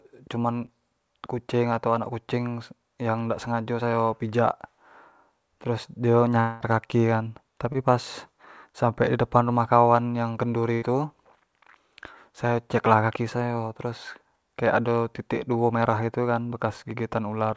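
You're hearing speech carried over a call link, with nothing above 8 kHz, which fits G.722 at 64 kbps. It has three kinds of fault. There's short concealed packet loss at 0.66–0.70, 7.72–7.76 and 16.96–16.99 s, each about 20 ms of audio that never arrived in time, patched by stretching the preceding sound, so you get a quick smear or wobble. Around 6.40–6.62 s there's a stretch where about 200 ms is simply gone, and the receiver papers over it with a continuation of the last sound that fades out before the speech picks up further along. That's likely a long network dropout. Then at 10.74–10.84 s a burst of packet loss drops about 80 ms in a row, heard as the last sound held as a buzz or hiss that sinks in level before the audio jumps ahead past the missing bit.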